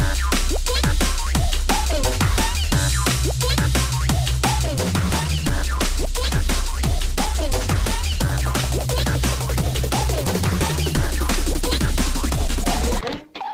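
At 4.64 s the adaptive stream dropped to a lower bitrate; from there to the end codec artefacts abruptly rise, without a gap.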